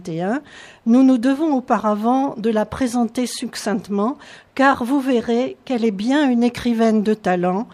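No technical faults can be heard anywhere in the audio.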